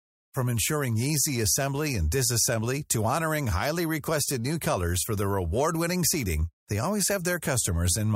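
No technical faults are audible.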